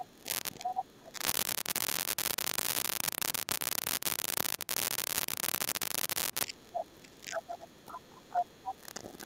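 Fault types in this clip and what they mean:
Speech suppressed in double talk: From 0.0 to 0.3 s, 0.5 to 1.23 s and 6.45 s to the end, the talker's level sinks by roughly 20 to 25 dB at its deepest. This is likely the echo canceller cutting gain when both ends spoke at once, because it could not tell the near talker apart from the loudspeaker echo and turned both down.
Other side's voice leaking through: A second voice comes through at 0.64 to 0.84 s, 6.77 to 6.84 s, 7.74 to 7.84 s and 8.34 to 8.73 s. Two of these bursts are about as loud as the talker. The one at 8.34 s is slightly louder, and the one at 7.74 s is faint. This is likely far-end audio from the loudspeaker reaching the microphone and surviving the echo canceller in short scraps.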